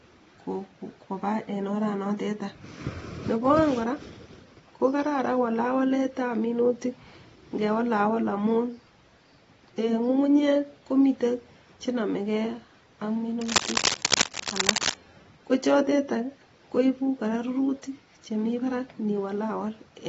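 From start to finish the speech sounds dull and smeared, with nothing above about 7.7 kHz and a watery, warbling texture clinging to sustained sounds and sibilants. The damage is plainly audible and is likely AAC compression. At a bitrate in the region of 24 kbps the AAC-LC encoder cannot afford the upper band, so it drops it and starves weaker components elsewhere, leaving gaps that smear and fizz.

From 13.41 to 14.99 s, scratching and rustling sweep across the speech in dense, uneven bursts, roughly as loud as the voice itself. This cable scratch noise is likely from a worn cable, connector or control being disturbed. As it moves, the contact resistance jumps around rapidly, and those fluctuations are added to the signal as a burst of noise lasting about a second and a half.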